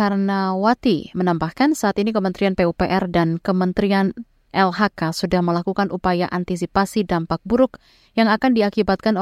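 No technical faults can be heard anywhere in the speech. There is nothing to place on a timeline.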